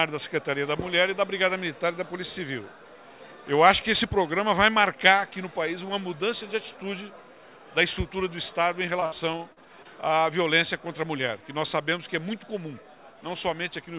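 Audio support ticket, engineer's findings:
Repeated packet loss (robotic sound), 9.0–9.87 s. Choppy, robotic stretch with six short holes, longest 63 ms. Jitter buffer fills each by extending the last sound.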